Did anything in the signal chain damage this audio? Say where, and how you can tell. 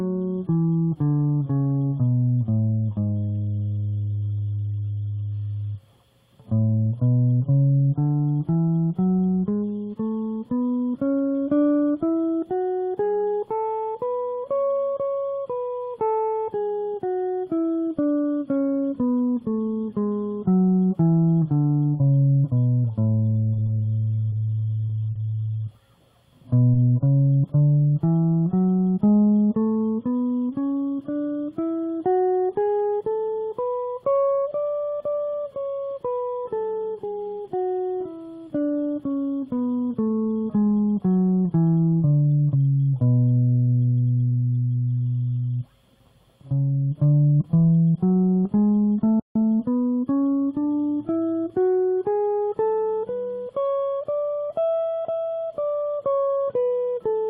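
Yes, and it's at the playback end. At 49.2 s the music just drops out, and nothing comes back until 49.36 s. That's a gap of about 0.16 s in mid-flow. That's a playback stall. The likely cause is the player's buffer running dry, or its audio thread getting blocked for a moment, so the output had nothing to send until it recovered.

Right after that, from 49.36 s to about 50.4 s, the music rushes along at roughly 1.15 times normal speed. The pitch doesn't rise. That's time-compressed catch-up. The player is burning off the backlog from the stall by snipping out small slices and cross-fading over the joins. That keeps the pitch steady, but the music sounds hurried for that second.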